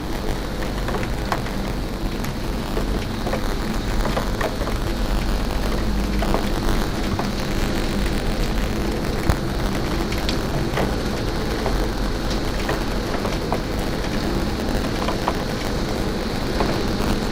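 Buffer tearing runs through the whole clip as a rattling, robotic buzz at 100 Hz, present only while sound is playing. The writing program and the playback hardware have drifted out of step, so they cross inside every buffer period. That points to periods of about 10 ms. A small slice of each period, roughly a twentieth, replays audio from about 20 ms earlier. The hard edges on either side of that slice produce the steady buzz over these sounds.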